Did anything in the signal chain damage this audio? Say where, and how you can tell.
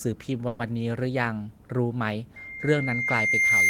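Yes, at two stages.

From 0.47 to 0.61 s the sound stops moving forward and is stretched into a decaying buzz for about 120 ms. Afterwards the speech picks up exactly where it left off, nothing skipped, just running about 120 ms later. That points to a call audio freeze, likely from packets stalling on the network until the jitter buffer emptied. A packet-loss dropout would instead lose material and jump ahead, and nothing here is lost.

From 2.36 s to the end, a single tone at 2.1 kHz swells steadily over roughly a second and a half until it sits about 10 dB above the speech. This is a loudspeaker feedback squeal in the acoustic path: the microphone is hearing its own loudspeaker, and at 2.1 kHz the loop gain passed one, so that frequency feeds on itself. Steady interference such as mains hum or a converter whine would hold a constant level rather than build.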